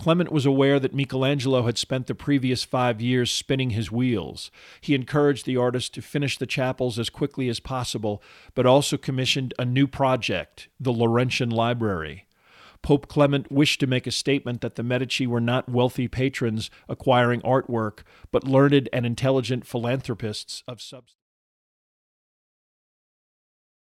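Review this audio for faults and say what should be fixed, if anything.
No faults turn up in this audio, so nothing needs to be fixed.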